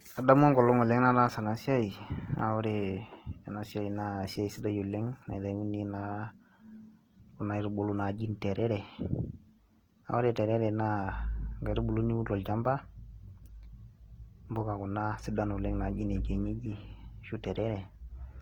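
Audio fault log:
throughout: Opus compression. Short of bits, the encoder, likely in its CELT music mode at a rate that fits about 16 kb/s, fills bands with folded or noise content. The speech therefore sounds plainly rough and grainy, though it still extends to 20.2 kHz.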